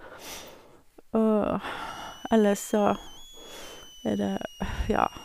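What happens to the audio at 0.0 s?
Nothing goes wrong at 0.0 s; the speech there is intact, with no dropout, click or distortion.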